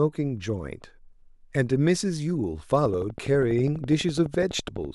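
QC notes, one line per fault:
2.85–4.86 s: train of clicks. Regular ticking at 12 clicks per second, about thirty in all, riding over the speech and its pauses. The pulses peak a few dB above the speech. Likely cause is interference from nearby equipment or a faulty connection or power supply.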